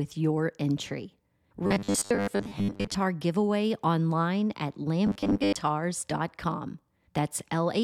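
From 1.67 to 2.95 s, the speech turns robotic. A rigid, metallic buzz at 100 Hz sits over it and follows the original only roughly. The same robotic sound from repeated short buffers returns from 5.07 to 5.56 s, again buzzing at 100 Hz. The likely cause is audio arriving too seldom, so the software repeats about 10 ms chunks, which fits a 10 ms buffer. Roughly 70 percent of the sound is repeated rather than new.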